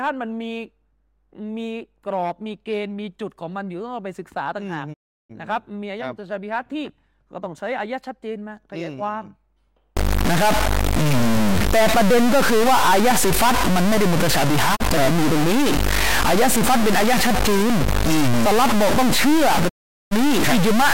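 Speech runs through two separate faults. A digital broadcast dropout mutes the audio three times: from 4.92 to 5.32 s, briefly from 14.75 to 14.82 s, and from 19.68 to 20.13 s. Each time the sound fades out over about 20 ms and returns after the gap, and whatever was said in between is gone. The receiver silences its output while incoming frames are missing or fail their checks. Unlike a network glitch, nothing is smeared, repeated or patched over. The sound simply fades to silence and returns. From 9.97 s to the end, the speech turns distorted, and the pauses are no longer silent but filled with noise. The likely cause is a stuck bit, a single data bit held at one value by a faulty line or converter, so the samples are pushed off in a pattern that follows the waveform. Clipping distorts only the loudest peaks. This fault adds noise even to near-silence, which sets it apart.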